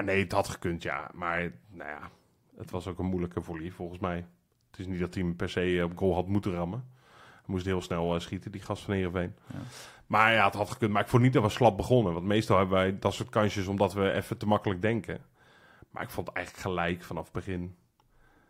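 Nothing in this speech recording stood out as a technical problem on listening.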